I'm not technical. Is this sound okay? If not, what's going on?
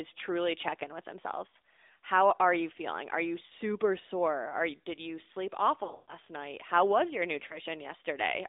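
No. The call went through the AMR narrowband mobile codec, a 2G/3G phone system that squeezes the voice into a narrow band, roughly 300 Hz to 3.7 kHz. So the whole clip sounds thin, muffled and noticeably buzzy and synthetic, like an old mobile call.

There are also lost AMR speech frames, where radio errors spoiled chunks of the signal and the decoder filled the gaps by repeating what it last heard, getting quieter each time. You hear brief dips or warbles at 1.48–1.56 s, 3.46–3.53 s and 7.48–7.60 s, and a longer, choppy dropout from 5.84 to 6.14 s that fades out briefly.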